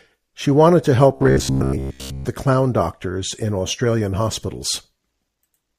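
A speech clip, and from 1.16 to 2.25 s, right after "wanted to", the voice collapses into robotic sound from repeated short buffers: a stiff, metallic buzz pinned at about 66.8 Hz that only loosely tracks the words. That pitch matches a chunk of roughly 15 ms being looped. The likely cause is audio arriving too slowly, so the player keeps replaying its last buffer, and most of that stretch ends up as repeats rather than real signal.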